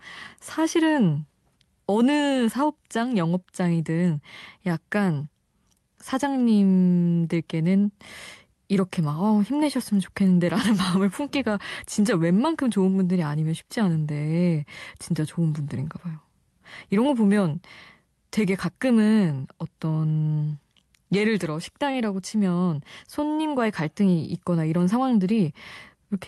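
Short stall from a late packet, 21.91–21.96 s: the jitter buffer emptied, so the speech sound was held 26 ms too long, nothing lost.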